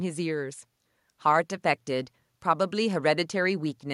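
No faults are audible anywhere in this speech recording.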